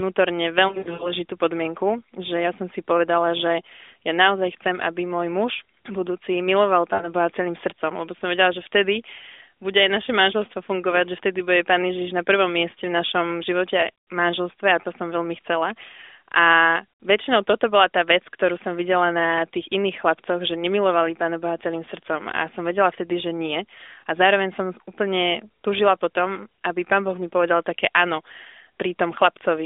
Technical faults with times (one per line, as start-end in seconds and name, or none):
0.68-1.11 lost AMR speech frames
6.94-7.13 lost AMR speech frames
14.82-14.86 lost AMR speech frames